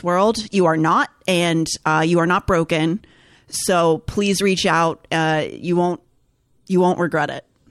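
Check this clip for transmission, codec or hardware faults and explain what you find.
Nothing to report: no transmission, codec or hardware fault is audible anywhere in the speech.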